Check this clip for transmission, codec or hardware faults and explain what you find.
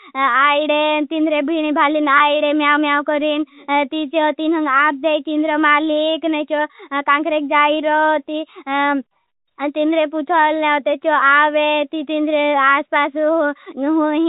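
There's one transmission fault, a brief packet loss with pitch repetition at about 2.18 to 2.20 s. Roughly 20 ms of speech went missing, which fits a single dropped packet. The receiver filled the hole by looping the last pitch period it had, so what you hear is a tiny held, slightly buzzy smear rather than a click or dropout. The gap's short enough that the speech picks straight back up. The G.711 telephone coding underneath keeps the band below 4 kHz.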